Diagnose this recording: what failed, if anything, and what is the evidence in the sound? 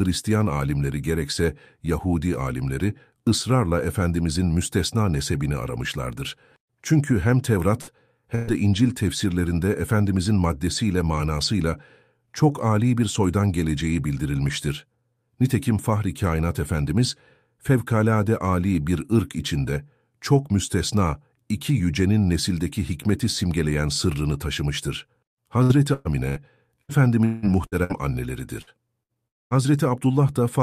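Burst of packet loss at the network stage, 7.81–7.90 s and 8.35–8.50 s: the last sound is stretched and faded, then speech resumes with about 60 ms and 120 ms missing.

Repeated packet loss (robotic sound) at 25.63–27.93 s (seven gaps, longest 0.18 s) and 28.62–29.61 s (four gaps): lost packets are patched repeatedly, giving choppy speech with pieces missing.

Long network dropout at 29.28–29.54 s: the last sound fades into about 0.23 s of silence, then speech returns further on, likely from packets never arriving.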